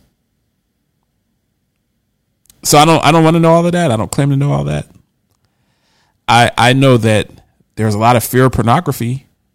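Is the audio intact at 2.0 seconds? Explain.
Yes, the speech at 2.0 seconds plays through cleanly, with no dropout, click, distortion or other fault at that moment.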